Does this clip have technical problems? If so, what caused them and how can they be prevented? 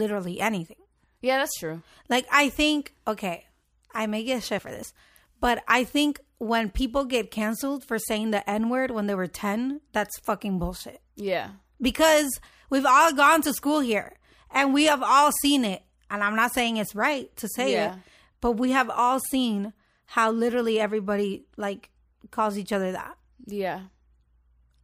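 Yes. From 4.46 to 4.86 s there is processor overload crackle: roughly fifteen buffers of about 5 ms were skipped, leaving hard-edged gaps. Unlike a single dropout, it is a dense, gritty burst that ends as the load eases. A larger buffer or lighter processing load prevents it.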